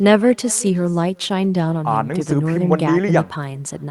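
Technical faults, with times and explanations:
Throughout, echo with no canceller: every phrase is trailed by a faint, thin copy arriving a bit under half a second later, about 24 dB down. The far end's loudspeaker is feeding its microphone and nothing strips it out, so the sound returns after the network round trip.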